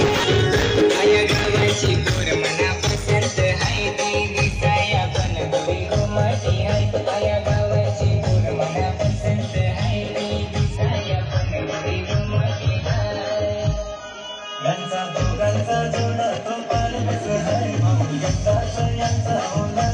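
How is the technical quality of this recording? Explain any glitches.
The recording has one clear glitch, a temporary drop in stream quality partway through. Adaptive stream at a lower bitrate, from 10.77 to 14.77 s: for about four seconds the player switched to a much lower-bitrate version of the stream, the kind of switch made when a connection slows. The treble vanishes above 6.8 kHz and the sound turns dull, with audible codec artefacts, which fits a drop from roughly 96 kbit/s to 16 kbit/s AAC. The change in and out is abrupt, with no gap.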